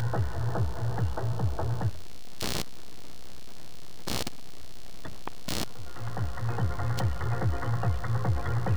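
Computer activity noise runs through the whole clip: a buzzing, chirping texture pulsing around 70 times a second, only somewhat below the sound itself. Processor or graphics load shifting the shared ground causes it. Unlike steady mains hum, it changes with the computer's workload, not the audio.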